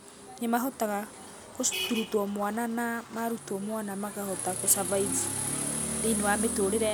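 Listening to the speech recording, nothing stood out as a technical fault at any point.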